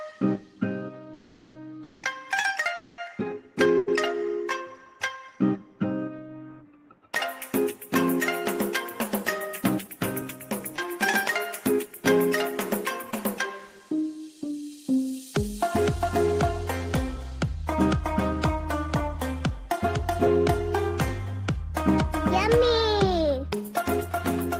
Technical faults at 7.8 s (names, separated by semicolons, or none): none